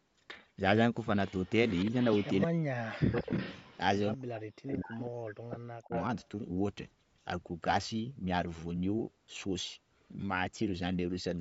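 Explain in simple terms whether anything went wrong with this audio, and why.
A slightly late second copy of the talker keeps sounding behind the speech, trailing about 0.17 seconds after the original. It comes in four stretches: 1.27 to 2.47 s, 3.16 to 3.78 s, 4.67 to 5.07 s and 5.90 to 6.27 s. It is quiet in the first and third stretches and nearly as loud as the talker in the second and fourth. This is an echo leak, and the likely cause is a loudspeaker call whose echo canceller let some of the voice picked up by the microphone slip back down the line.

The main voice also dips or drops out. There is a brief, mild dip at about 1.9 s. From 2.46 to 3.31 s it falls almost to silence, and between 4.16 and 5.92 s it keeps cutting out deeply for most of that time. This is speech suppressed in double talk. It likely happened because both sides were talking at once, and the echo canceller, unable to tell the talker from the returning echo, turned everything down together.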